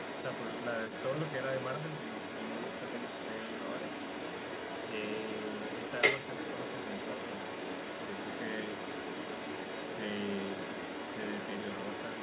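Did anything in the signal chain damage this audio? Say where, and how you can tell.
Yes. Call processing failed with an echo leak, likely from a far-end loudspeaker whose echo canceller let its microphone pickup return down the line. Throughout the clip, a copy of the speech trails 225 ms behind, only slightly quieter.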